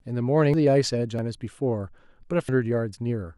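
At 0.54 s, 1.19 s and 2.49 s, compressed frames are skipped: the speech jumps ahead by about 0.7 s, 0.7 s and 0.3 s, in frames of 92.9 ms.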